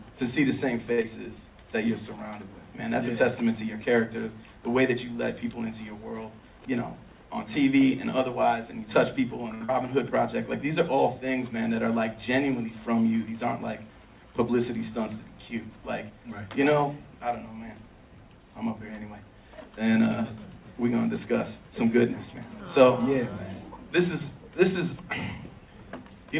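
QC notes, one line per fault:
0.92–1.00 s and 9.54–9.63 s, short stall from a late packet: the sound hangs for 59 ms and 63 ms with a slight buzz or dip, because the jitter buffer emptied and the last sound was stretched until the late packet arrived.
1.02–1.06 s and 9.65–9.70 s, short concealed packet loss: a brief smear or wobble where 40 ms and 60 ms of audio never arrived and were filled by extending the preceding sound.
6.38–6.66 s and 15.70–16.47 s, jitter buffer speed-up: the audio briefly sounds hurried at unchanged pitch, running at 116% and then 109%, as short pitch-period slices totalling about 50 ms and about 70 ms were cut to shrink an overfull buffer.
10.73–11.33 s, jitter buffer slow-down: the sound drags slightly, at 95% speed, as 37 ms of repeated pitch periods or bits of pauses were added to rebuild a low buffer.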